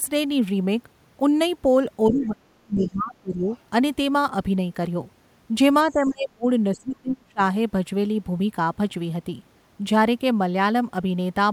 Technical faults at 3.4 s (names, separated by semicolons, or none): speech suppressed in double talk